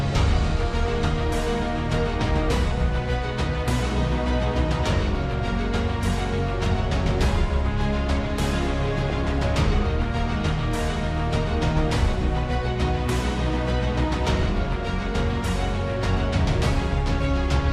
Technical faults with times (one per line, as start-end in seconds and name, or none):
0.00-17.72 MP2 compression
0.88-0.92 DAB burbling
9.03-9.33 DAB burbling